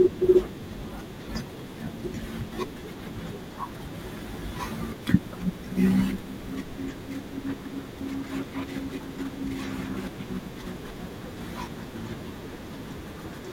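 At 7.08 s the speech jumps forward. A tiny slice of sound, only a few milliseconds, goes missing. The audio on either side is butted straight together, with no gap of silence between. The result is a brief skip in the flow. This is audio missing between chunks. The likely cause is a recorder or processor handling the signal in 4-second blocks and dropping a sliver while it closes one block and opens the next.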